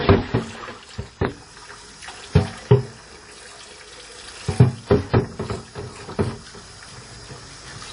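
WMA compression artefacts run throughout this recording of everyday sounds, likely from a transform encoder working at a low rate, which fits roughly 32 kbps. Its long blocks smear quantisation noise into a ringing, washy texture with breathing hiss, and nothing remains above 10.1 kHz.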